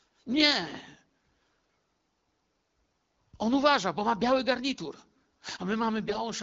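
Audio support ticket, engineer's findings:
AMR bit errors, 6.06 to 6.19 s: hoarse, gargly scratch, pitch and level held. Span fits six 20 ms frames. A few percent of weakly protected bits flipped, misplacing excitation pulses.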